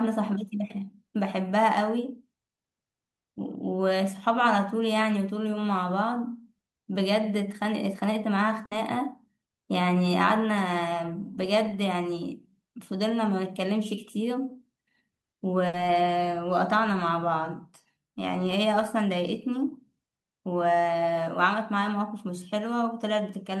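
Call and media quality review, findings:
Burst of packet loss, 8.65–8.74 s and 15.67–15.76 s: jitter buffer/network path; 60 ms concealed by fading continuation of preceding sound, then resumes with 60 ms of speech dropped.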